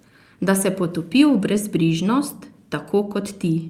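Clock drift between sender and receiver runs through the whole speech clip. The sender's clock is about 2% slow. The receiver's buffer keeps draining.

Repeated timing corrections follow from 0.10 s to 3.51 s. The receiver repeats short pieces to keep up. Small hiccups recur. Roughly a tenth of a second is added.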